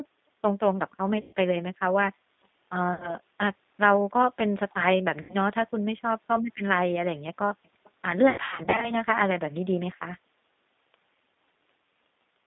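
It's a speech clip sent through a G.729 codec the whole way: the line runs from about 200 Hz to 3.7 kHz at 8 kbit/s, so there's an obvious rough, synthetic edge from the codec rebuilding the voice out of a few pulses per frame. On top of that there's VoIP packet loss concealed by the speech codec at 1.21–1.34 s, 2.94–3.16 s and 5.21–5.35 s, plus a scattered burst from 8.30 to 8.92 s. The decoder fills each gap by stretching the last sound into a fading buzz or coloured noise, and the voice stays weak for a moment after each gap ends.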